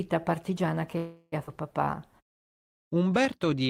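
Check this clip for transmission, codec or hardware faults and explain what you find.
Three network faults are audible in this speech clip. Each comes from late or uneven packet delivery on a call.

Call audio freeze, 0.97 to 1.34 s, just after "partigiana che". The receiver's jitter buffer ran dry while packets were likely held up in transit, so it stretched out the last sound it had for about 0.35 s instead of falling silent. That sound is heard as a buzzy continuation that fades. When the delayed audio arrives, speech picks up exactly where it stopped. Nothing is lost, but a 347 ms pause has been inserted and the playout is now running that much later.

Skip ahead, 1.46 to 1.49 s, right after "partigiana che ha". Here a stretch of roughly a fifth of a second was discarded. This fits the buffer shedding the excess delay built up by the freeze. Later audio was already queued, so the two sides are spliced together with only an 8 ms fill. 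The speech lurches forward abruptly, with part of the utterance simply gone.

Jitter buffer slow-down, 1.84 to 3.64 s. The buffer was running short and rebuilt its reserve by repeating individual pitch periods and small slices of pauses many times over. This added 110 ms across the stretch. Playback runs at 94% speed while the pitch stays the same, so syllables sound slightly drawn out.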